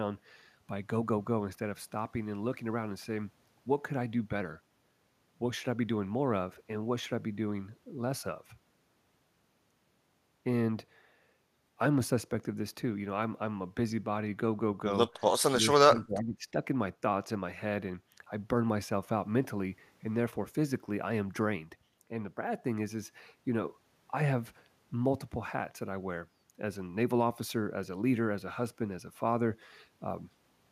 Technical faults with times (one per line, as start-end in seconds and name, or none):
15.60-16.54 speech suppressed in double talk